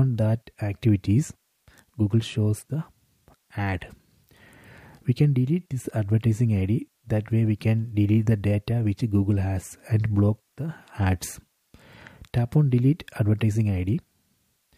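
Low bit depth with dither runs throughout. A steady, even hiss sits about 50 dB below the signal, without distortion, which fits dithered 10-bit resolution.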